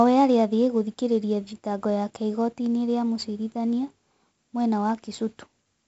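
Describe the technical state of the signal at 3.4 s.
At 3.4 s the speech is passing through 4-bit ADPCM compression, which affects the whole clip rather than just this moment. Each sample is coded as a small 4-bit step from a predicted value, with the step size adapting as it goes, so the coding error rises and falls with the speech level. Here the damage is heavy: a gritty hiss rides on every louder sound, and sharp attacks distort where the step cannot grow quickly enough. Nothing is heard above about 7.7 kHz, which dulls the top end and fits a 64 kbps stream at a 16 kHz sample rate.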